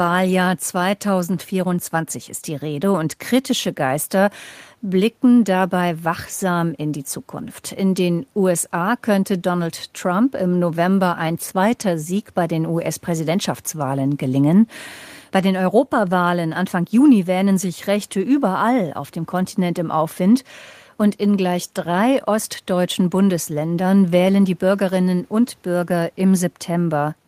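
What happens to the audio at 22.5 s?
Nothing goes wrong at 22.5 s; the speech runs on intact through that moment.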